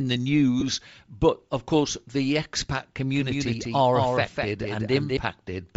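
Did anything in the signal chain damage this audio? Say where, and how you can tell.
Yes. Bluetooth LC3 compression throughout, at the codec stage: the upper band sounds grainy and breathy, likely from noise-filled spectrum at a low bitrate with short 7.5 ms frames.

Lost LE Audio frames, network stage, at 0.60 to 0.63 s and at 2.13 s: brief noisy smears where the decoder repeated the previous spectrum. The first gap fits about three frames.

Doubled audio track from 3.15 to 5.17 s, likely at playback or capture: a full-band copy about 5 dB quieter trails by around a fifth of a second, with no reverberant colour, and starts and stops abruptly.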